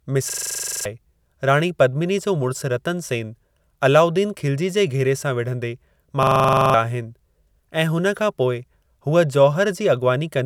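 At 0.30 s and 6.23 s, a system hang loop occurs. The hardware replayed one 42.7 ms block, fitting a 2048-sample buffer, as a rattling 23.4 Hz buzz. Each lasts about half a second, losing that much speech, and ends before "राणी पद्मिनी जो" and "आहिनि ऐं".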